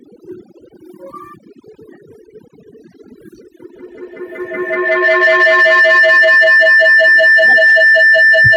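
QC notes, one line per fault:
throughout: overdone noise removal. A noise reduction stage set far too aggressively is pulling individual frequency bands down or out whenever they sit near its noise estimate, taking quiet speech detail with them, so the background drops and breaks up into twinkling specks.
3.6 to 8.56 s: feedback howl. A microphone-to-loudspeaker loop gains level on each pass, so the repeats grow rather than decay and narrow onto the frequencies the loop favours. This builds into a howl at around 2 kHz, with the loop repeating roughly every fifth of a second, peaking about 27 dB above the speech and continuing to the end.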